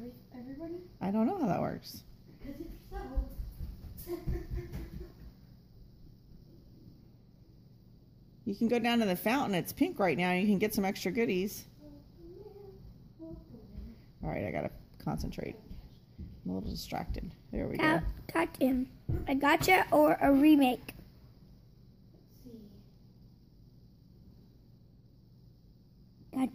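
No technical fault can be heard anywhere in the audio. There is nothing in it to time or trace to a cause.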